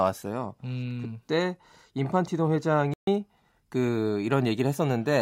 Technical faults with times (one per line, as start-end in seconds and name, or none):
2.94-3.07 playback stall